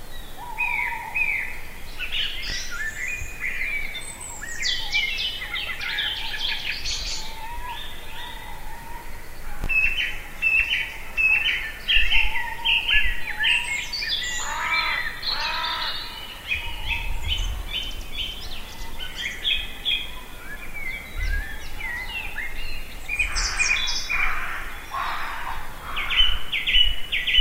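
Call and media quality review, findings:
Chunks out of order at 2.48–2.52 s and 9.62–9.66 s: brief jumbled moment. Playout/jitter buffer likely released a 20 ms chunk one slot late, leaving three hard joins.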